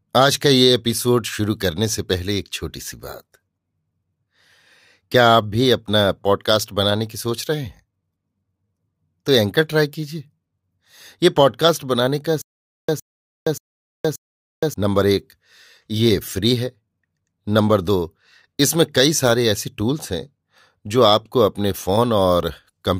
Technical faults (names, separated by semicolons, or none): stutter with silent gaps